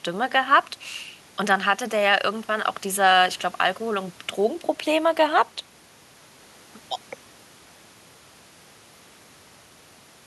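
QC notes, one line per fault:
No faults found.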